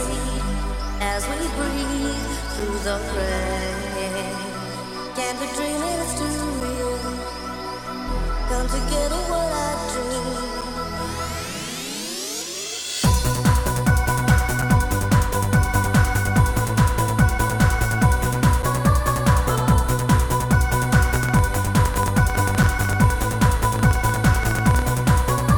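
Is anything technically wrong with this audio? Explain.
Yes, there are two problems. First, there's a gap between chunks at 2.60, 6.60, 10.61, 14.62, 18.62 and 22.63 s. Each is a hole of about 7 ms, landing every 4 s, which points to the audio being delivered in 4-second chunks with a sliver of silence at every join. Nothing is missing, but the flow gets chopped briefly and very regularly, so you hear small, evenly spaced dropouts.

Second, from 21.16 to 24.83 s there's a train of clicks, around 13 per second and unevenly spaced, something like fifty in total. They're loud, peaking roughly 10 dB above the sound itself, and they all have much the same shape. It comes across as ragged ticking or popping laid over the audio. The likely culprit is electrical interference from nearby gear or a faulty connection or power supply, injecting a pulse over and over. Note that the gap at 22.63 s falls right inside this stretch.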